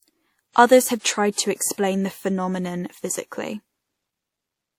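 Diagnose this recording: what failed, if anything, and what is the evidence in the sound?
The codec stage failed: the speech carries transcoding between lossy codecs for the whole clip. Two layers of coding artefacts are heard together, which points to an MP3 pass at around 64 kbit/s likely re-encoded as WMA at a similar rate, with content still reaching 20 kHz.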